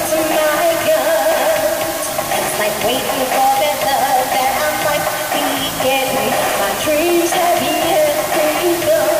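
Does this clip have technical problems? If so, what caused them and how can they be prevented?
Yes. Low bit depth with dither runs throughout: the audio is reduced to about 4 bits, with dither randomising the rounding error into a constant, even hiss roughly 10 dB below the signal. A spectrogram shows a flat, dense noise floor across all frequencies, and the waveform sits inside a thick fuzzy band. Prevent it by keeping 16 or 24 bits through every processing and export stage.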